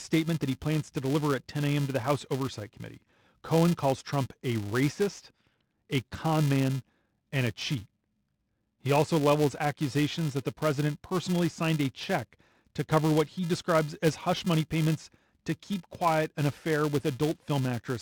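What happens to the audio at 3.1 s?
At 3.1 s the speech carries a steady buzz at 375 Hz. It comes from a filter restarted on every block, a fault present for the whole clip rather than just this moment. The filter discards its internal state at each block boundary and starts again from silence, so every block opens with a small transient. The 375 Hz repetition rate fits a 128-sample block, and the buzz rises and falls with the level of the speech.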